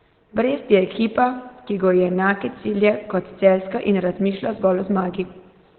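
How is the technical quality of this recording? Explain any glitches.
The quality is poor throughout. Speech is muffled and hoarse, with nothing above 4.2 kHz. This is likely Opus compression in its narrowband SILK speech mode, at a bitrate that sounds like about 12 kbps. A spectrogram would show a flat, empty band above that cutoff.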